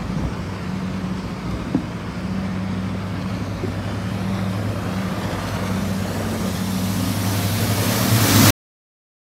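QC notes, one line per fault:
8.50 s to end: cut-off end. The sound just stops dead mid-event at 8.50 s and drops straight to digital silence with no decay, since the final stretch of audio was never written out. The last three-quarters of a second is empty.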